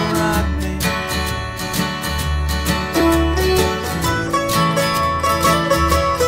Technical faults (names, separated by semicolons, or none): block of digital silence